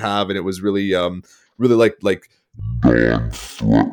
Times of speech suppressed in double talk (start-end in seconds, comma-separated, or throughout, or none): none